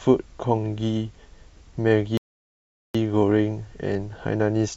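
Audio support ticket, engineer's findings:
Rebuffering stall at 2.17 s to 2.95 s: speech cuts to dead silence, then resumes exactly where it stopped, with nothing missing and about 0.77 s added. Player buffer underrun, playback halted until more data arrived. Waveform shows a flat-line gap; spectrogram shows a clean vertical blank band.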